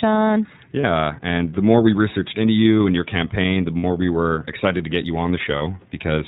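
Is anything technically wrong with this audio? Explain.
Yes. The speech has passed through the iLBC codec, and three short dropouts were concealed by its decoder.

Throughout, the iLBC coding is plainly audible. Nothing above 4 kHz survives, so the speech sounds narrowband and slightly rough and synthetic. That character fits iLBC's 30 ms mode at about 13.33 kbps, where each frame's excitation is coded independently. On a spectrogram, all energy stops at a flat ceiling at 4 kHz.

The lost iLBC frames occur at 0.81–0.84 s, just before "and the more we"; at 3.77–3.84 s, between "and your campaign the" and "we were excited to"; and at 5.58–5.61 s, just after "excited to get you". The first and last are about 30 ms long, a single frame, and the middle one is about 60 ms. The decoder filled each gap by repeating the last pitch cycle blended with noise, so the speech briefly freezes into a buzzy, held vowel. 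Because the frames are independent, clarity returns immediately afterward. On a waveform, each gap appears as a short stretch of near-identical repeating cycles. On a spectrogram, it shows as a block of static, blurred harmonics.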